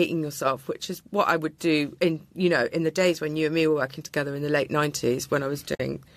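Near the end of the speech, from about 5.75 to 5.80 s, the sound drops into a brief silence that fades out and back in with soft edges. This is AAC frame loss with muting: roughly 50 ms of coded audio went missing, which fits about five short frames, and the decoder zeroed their spectrum. The overlapping transform windows taper the gap at each side. The surrounding audio carries the light coloration of what is likely low-delay AAC coding.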